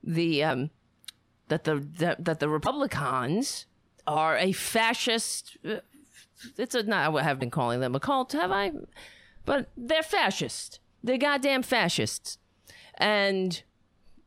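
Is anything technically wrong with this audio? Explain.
Yes. The speech is hit three times by damaged data in a compressed stream, at 0.47–0.51 s, 2.63–2.67 s and 7.38–7.42 s, each about 40 ms long. Corrupted bytes in the coded stream make the decoder misread those frames and lose sync until it finds a valid header, so each spot is a brief chirp, squawk, click or short hole.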